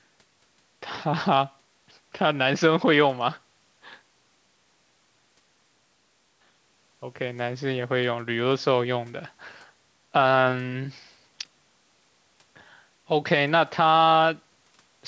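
No faults: the speech carries only the expected call microphone processing, with the lowest bass trimmed by its high-pass filter and nothing above 8 kHz.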